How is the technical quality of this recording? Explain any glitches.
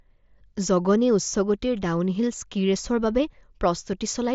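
No glitches can be heard anywhere in this recording.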